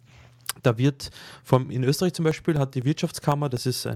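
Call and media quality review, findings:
Periodic USB or driver dropouts, 2.06–3.82 s, after "wird vom in": regular ticks every 0.25 s, roughly 1 ms gaps filled with silence, from bus or driver stalls.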